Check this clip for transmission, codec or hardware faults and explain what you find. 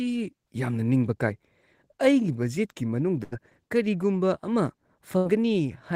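Two bursts of packet loss affect the speech, from 3.23 to 3.34 s and from 5.18 to 5.27 s. In each, about 80 ms of audio never arrived, and the receiver filled the hole by extending and fading the last sound. That is heard as a brief held buzz or fading hiss before speech jumps ahead. A spectrogram shows smeared, flat harmonics tapering off, and the waveform shows a repeating, shrinking pattern with an abrupt resumption.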